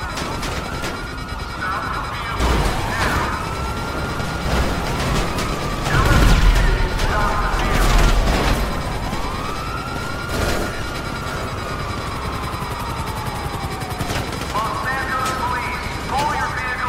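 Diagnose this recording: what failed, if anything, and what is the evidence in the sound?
Nothing stood out on listening to this recording.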